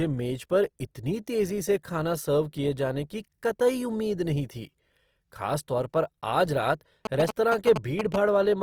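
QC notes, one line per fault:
Throughout: Opus compression, likely at a low bitrate in music mode. The speech sounds rough and grainy, with bands filled by folded or noisy content rather than left empty. Damage is plainly audible. Bandwidth stays full, with nothing above about 20.3 kHz.
7.05 to 8.16 s: GSM signalling bursts. A galloping run of short buzzes at 217 Hz sits at roughly the level of the speech. A nearby phone's radio bursts are being rectified by the audio circuit and heard as sound.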